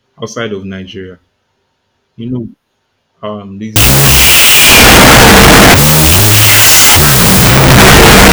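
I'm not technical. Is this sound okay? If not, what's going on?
No. From about 3.76 s to the end, the speech drops into loud hiss with the voice buried underneath, slowed to half speed and an octave lower. This is a wrong sample width fault, consistent with 16-bit audio being read as 8-bit.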